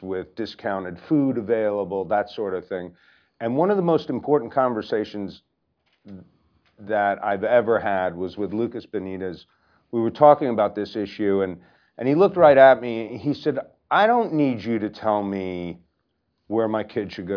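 No technical faults were found in this speech recording.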